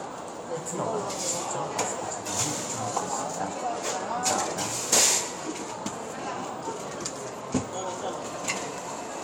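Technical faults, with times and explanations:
Nothing technical to flag here; the sound comes through without any faults worth noting.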